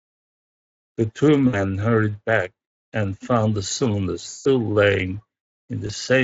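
VoIP packet loss concealed by the speech codec at 1.47–1.64 s, 4.29–4.48 s and 5.87–5.92 s: the decoder stretches the last sound into a fading buzz instead of dropping to silence.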